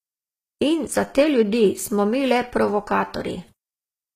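Throughout, the treble sounds synthetic and gritty, with s sounds turning lispy and nothing above 14.9 kHz, likely HE-AAC compression rebuilding the top band at a bitrate near 20 kbps.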